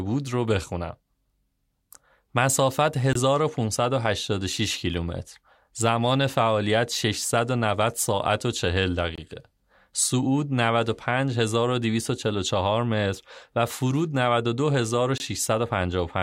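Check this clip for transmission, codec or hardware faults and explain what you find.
There is a gap between chunks, heard as short hard-edged dropouts in the speech at 3.13, 9.15 and 15.18 s. Each lasts about 23 ms and they recur every 6.0 s. The audio was delivered in 6-second chunks with silence inserted at each join. Nothing is lost, but the flow breaks at those points.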